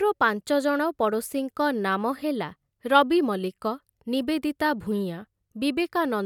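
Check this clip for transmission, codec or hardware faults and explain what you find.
Nothing stood out on listening that would point to a fault anywhere in the recording.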